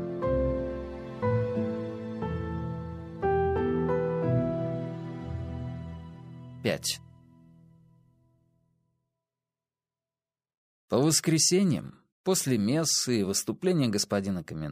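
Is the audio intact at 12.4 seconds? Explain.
Yes, the audio at 12.4 seconds is intact, with no dropout, click, distortion or other fault at that moment.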